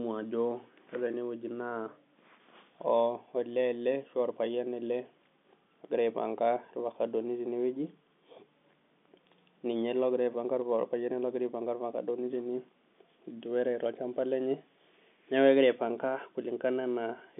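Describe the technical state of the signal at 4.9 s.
At 4.9 s the speech is intact, carried cleanly over the G.711 telephone path with its usual band of roughly 150 Hz to 3.5 kHz.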